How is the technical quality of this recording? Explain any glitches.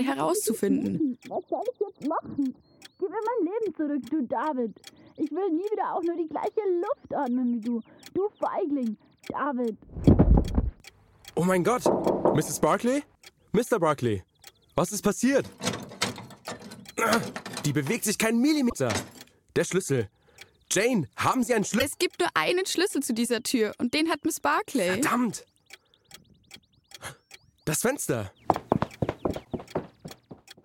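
The recording has three brief glitches, all from damaged data in the compressed stream, at 18.69 to 18.74 s, 21.78 to 21.82 s and 29.41 to 29.47 s. Each time, corrupted bytes in the encoded data left the decoder unable to read the frames there. It lost sync and had to hunt for the next valid frame header. Each break lasts only about 40 to 60 ms and is heard as a short chirp or blip cutting into the sound.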